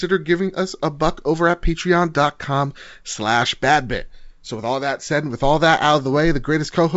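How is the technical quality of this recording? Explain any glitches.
The recording shows no glitches or faults; it has the band-limited sound of G.722 wideband telephone coding, with content extending to 7.7 kHz and nothing above it.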